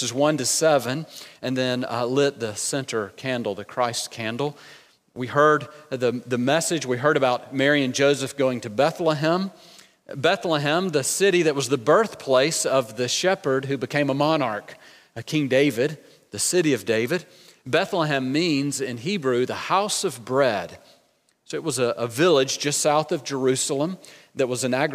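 Nothing goes wrong anywhere in the recording; there's no technical fault to point to at any moment.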